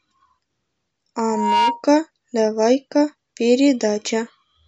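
At about 1.23 s a loudspeaker feedback squeal kicks in and hangs on until roughly 1.84 s. The mic is hearing the loudspeaker it's driving, and around 944 Hz the loop gain tips past one, so that frequency keeps feeding itself. You hear a single tone swell up over something like a third of a second until it's sitting about as loud as the speech, then it cuts off.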